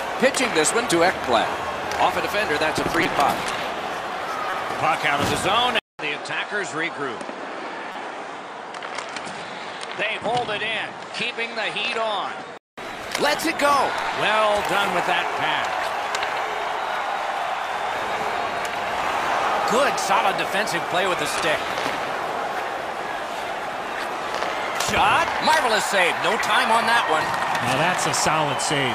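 At 3.03 to 3.06 s there is a corrupt frame decoded. A few compressed frames arrived with flipped bits, and the decoder played them anyway. Misread gains pushed energy to the wrong frequencies. It sounds like a loud, harsh blip. A second one follows at 4.49 to 4.53 s, covering about two frames. This burst is quieter but still sharp.

At 5.79 s the sound cuts out for 200 ms. It then returns duller and somewhat quieter. Nothing is left above 9.8 kHz. A faint new hiss sits well below the signal. The likely cause is the input switched to a poorer device, such as a second microphone or a headset's call profile. Its narrower band and its own tone give the boxy colour.

At 7.92 to 7.96 s, during the dull stretch, another corrupt frame decoded spans about two frames. It is heard as a quieter chirp.

At 12.78 s the full bandwidth and level come back.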